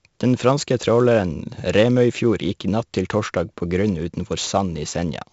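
4-bit ADPCM compression runs through the whole clip. Each sample is coded as a coarse step from a predicted value, so heavy gritty hiss rides on the louder speech. Nothing reaches above 7.7 kHz, which fits a 64 kbps stream.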